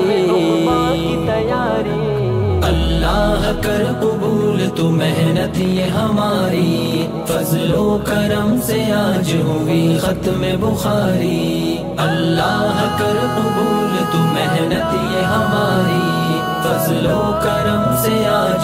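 A train of clicks runs from 5.62 to 7.03 s: about twenty sharp, similar pulses arriving at roughly 15 per second but at an uneven pace. They sit on top of the sound and continue through any gaps, reaching about the same level as the audio itself, so they read as a busy, stuttering tick. The likely cause is electrical interference or a faulty connection or power supply injecting short spikes into the signal path.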